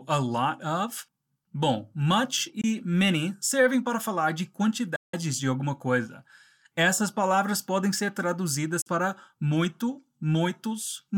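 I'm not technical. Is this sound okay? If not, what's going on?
No. The speech cuts out three times. There is a tiny gap from 2.61 to 2.64 s, just before "many servem para falar". The longest gap runs from 4.96 to 5.14 s, between "servem para falar de" and "de alguma coisa". A short gap falls at 8.81 to 8.87 s, before "para muito". Each gap starts and stops sharply. The speech then carries on as if it had kept playing. This is likely a Bluetooth dropout. The sound reached the headphones too late and was skipped.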